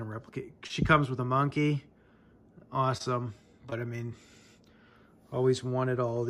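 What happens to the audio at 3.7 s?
At 3.70 to 3.74 s there is short concealed packet loss: roughly 20 ms of the stream failed to reach the decoder in time, so the receiver covered the gap by extending the sound it had just played, about 17 ms of synthesized fill, before cross-fading back into the real signal. To the ear, this gives a brief smear or wobble in the sound.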